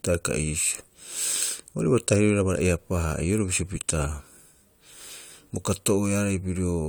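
No technical faults can be heard in this recording.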